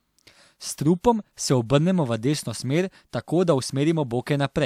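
Speech, with no technical faults to be heard anywhere in the recording.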